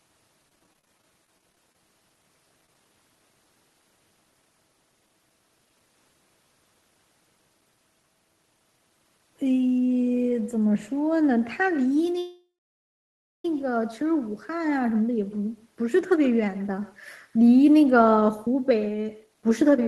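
Speech runs with echo with no canceller from start to finish. A quieter, thinner copy trails each sound by roughly 150 ms, at about 21 dB below the talker. From 0.49 to 1.75 s there is repeated packet loss with robotic sound. Many gaps, none over 20 ms, are patched, so about 16% of that stretch is filled-in audio and it turns choppy. Short concealed packet loss then smears the sound briefly at 2.66–2.69 s and again at 2.74 s. From 12.19 to 13.45 s there is a call audio freeze. The sound fades and stays silent for about 0.97 s, then resumes where it stopped, likely because packets were held up and the jitter buffer ran dry. From 17.59 to 19.79 s a jitter buffer speed-up plays the audio at 109% speed with unchanged pitch. Roughly a fifth of a second is trimmed, so the ending sounds hurried.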